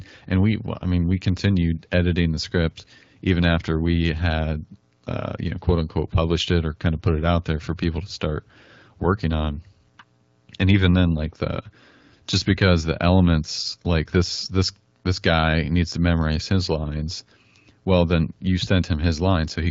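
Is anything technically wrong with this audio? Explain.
No, nothing technically wrong can be heard here.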